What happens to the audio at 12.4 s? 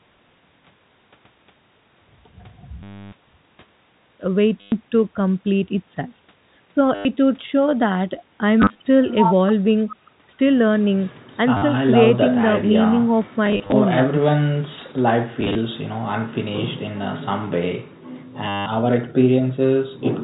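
Nothing goes wrong at 12.4 s: the speech carries on intact through that moment, with only the steady telephone-band sound of G.711 coding, cut off above 4 kHz, that runs through the whole recording.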